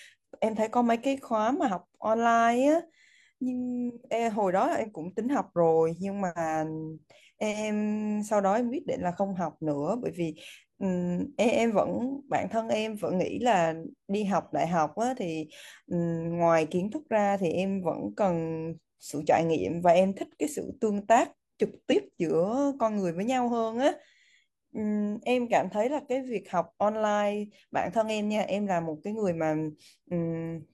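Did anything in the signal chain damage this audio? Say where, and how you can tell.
Yes, damaged data in a compressed stream, at the codec and storage stage: brief glitches in the speech at 1.63–1.69 s, 4.79–4.85 s, 9.15–9.20 s, 21.88–21.94 s and 28.05–28.10 s, each about 50–60 ms long. Corrupted bytes in the encoded stream make the decoder misread those frames and lose sync, so it emits a short burst of garbled output until it locks onto the next valid frame header.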